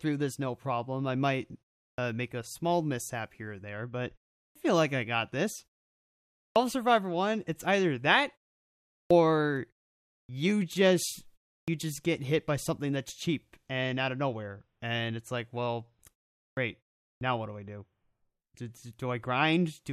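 At 1.91, 4.48, 6.48, 9.03, 10.22, 11.6, 16.49 and 17.14 s, speech resumes with a clipped start after a pause. The output path apparently idles during pauses of 0.31 to 0.88 s and needs time to wake, so roughly 70 to 81 ms of each onset is swallowed. This happens after "no problem I might", before "make a small mishap", and after "and it's like well". On a waveform, each segment begins at full amplitude with no rise, and a spectrogram shows energy switching on abruptly with the first sounds missing. The pauses themselves fall silent as expected.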